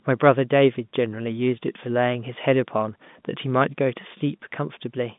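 No technical faults are audible.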